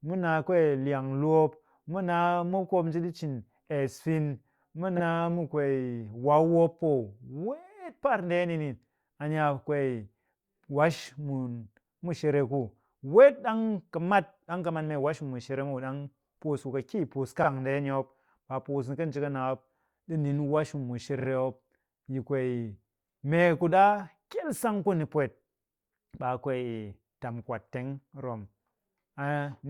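A brief stutter, where a 40 ms slice of speech plays again, occurs at 4.97 to 5.01 s just before "mu kwee" and at 17.43 to 17.47 s. At 21.19 to 21.28 s the same slice plays three times. These are repeated frames: a short run of compressed frames was sent again and decoded again, adding 40 to 80 ms each time.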